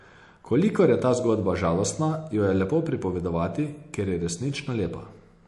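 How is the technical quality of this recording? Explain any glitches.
The recording carries audible compression damage throughout. From start to end the speech sounds watery and swirly, with nothing above 11.3 kHz. This is likely MP3 compression starved of bits, consistent with a bitrate around 48 kbps.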